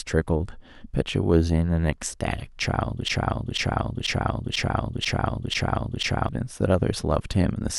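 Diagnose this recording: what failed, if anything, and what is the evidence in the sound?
A broken-record loop from 3.08 to 6.29 s repeats one 0.49 s fragment seven times as identical spectrogram blocks, likely from a stalled playback buffer.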